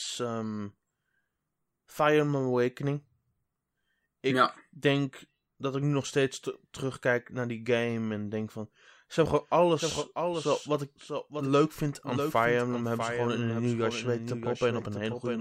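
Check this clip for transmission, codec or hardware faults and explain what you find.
One fault is present. From 9.19 s to the end, a doubled audio track: the speech was likely captured twice, by a second, slower path or an out-of-step edit. A full-band copy around 5 dB quieter trails by roughly 0.7 s, starting abruptly and carrying no decay or room colour.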